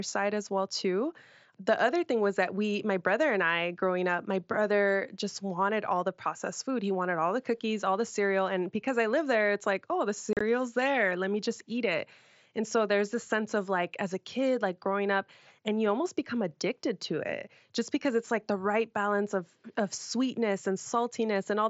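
After "it's like oh the", at 10.33–10.41 s, unconcealed Bluetooth headset packet loss drops 52.5 ms of speech across 75 ms, leaving abrupt, unfilled gaps.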